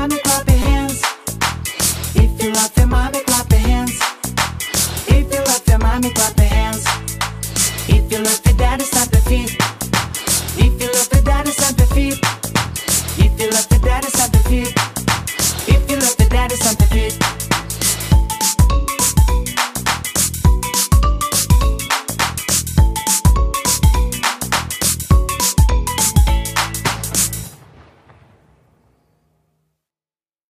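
At 0.62 s, new audio arrived late and the device replayed its last buffer, a repeated buffer fault. A roughly 5 ms piece sounds five times with hard joins, heard as a brief buzz.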